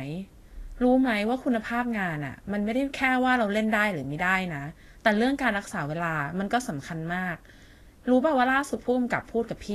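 From start to finish the speech carries Vorbis compression damage, likely from a low-quality encode at a rate fitting roughly 34 kbps. Nothing reaches above 14.2 kHz, and the coarsely quantised treble below that turns into hiss, leaving consonants grainy and attacks blurred.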